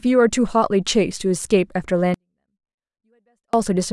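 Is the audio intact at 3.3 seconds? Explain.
No. At 3.3 seconds the speech is caught in a 24-bit alignment error (too quiet), running from 2.14 to 3.53 s. Samples held in the low 24 bits of each 32-bit word are read as if they filled the whole word. Every value lands 256 times too small. That is a drop of about 48 dB. The speech stays clean and undistorted. It simply falls away at once to near silence, then returns at 3.53 s.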